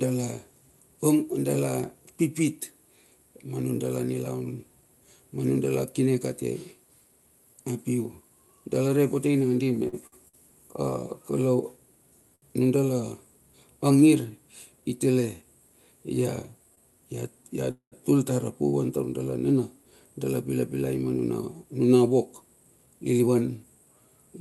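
A speech recording carried over a call link whose top end stops at about 12 kHz, with several timing faults from the jitter buffer. From 9.75 to 10.35 s there are repeated stalls (stutter). The buffer ran dry four times in that stretch, and each gap was filled by prolonging the last sound. The gaps total 161 ms, the longest 55 ms, so about a quarter of that span is held-over sound. Nothing is lost, but the speech drags in small hitches. That clustering is what sets it apart from a single stall. A short stall from a late packet occurs once from 12.35 to 12.44 s, where 67 ms of held sound is inserted, and again from 16.75 to 16.79 s with 22 ms. Each is one isolated hold, with a slight buzz or sag, before the speech resumes from exactly where it paused. The call audio freeze at 17.71 to 17.94 s sounds like a longer version of the same thing: 208 ms of inserted time, in which the continued sound fades out and roughly 100 ms is outright silence. 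The length and the drop to silence mark it as more than a short stall. A burst of delayed packets is the likely cause. The jitter buffer speed-up runs from 14.82 to 15.43 s at 107% speed, trimming around 50 ms, and again from 22.41 to 23.65 s at 109%, trimming about 150 ms. Here the receiver cut out pitch-period-sized slices to shrink excess delay. Pitch stays the same while the delivery sounds hurried, the opposite of the stalls, which stretch time.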